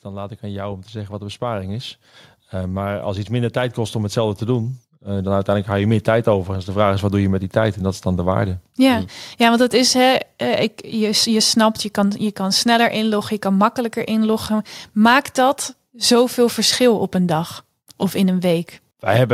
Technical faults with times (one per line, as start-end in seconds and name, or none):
0.05-1.97 automatic gain rising
2.51-8.10 automatic gain rising